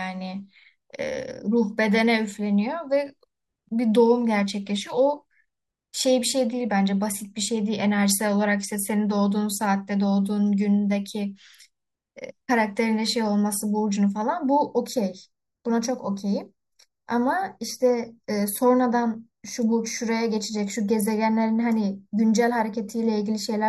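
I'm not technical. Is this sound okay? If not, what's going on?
No. From about 14.2 seconds to the end, the speech turns hollow and a bit phasey. That's channel delay (comb filtering): one side arrives a tiny fraction of a millisecond late, and when the two are combined, some frequencies cancel, starting around 3 kHz.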